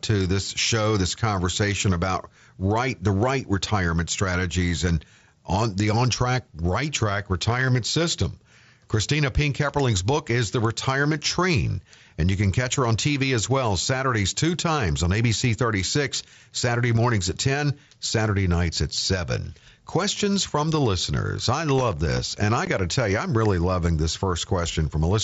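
A gritty burst of crackle runs from 21.79 to 22.20 s, just after "from the listeners I", tearing at the speech for about 0.4 s before clearing. This is processor overload crackle: the device fell behind on very short audio buffers, which fits blocks of well under a millisecond. Around ten of those deadlines were missed over that stretch, and each miss left a tiny hard-edged gap of silence, so the gaps fuse into crackle.

At 22.65 s, right before "got to tell you", the speech drops out for about 15 ms with abrupt edges. This is unconcealed Bluetooth headset packet loss: the link between headset and phone lost audio, which fits two lost frames, and nothing filled the hole, so silence or an idle pattern sits where the speech should be. The mSBC wideband headset codec carries the speech throughout, with its light grain on louder passages.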